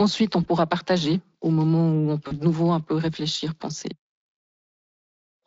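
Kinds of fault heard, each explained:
VoIP packet loss concealed by the speech codec: at 0.43–0.47 s and 2.27–2.37 s, the decoder bridges roughly 20 ms and 40 ms gaps by extending its last pitch and filter with fading gain, leaving a brief buzzy or noisy smear that lingers past each gap.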